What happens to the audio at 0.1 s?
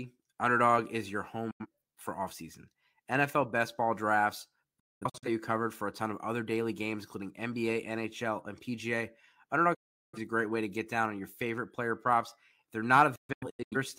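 Nothing goes wrong at 0.1 s; the speech there is intact, with no dropout, glitch or distortion.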